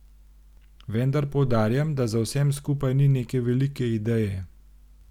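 Nothing goes wrong anywhere in this bit of speech, so there's no fault to point to at any moment.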